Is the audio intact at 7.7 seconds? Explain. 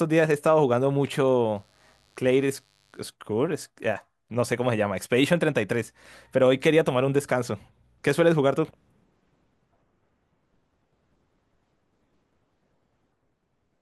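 Yes, the speech at 7.7 seconds is intact, with no dropout, click, distortion or other disturbance at that moment.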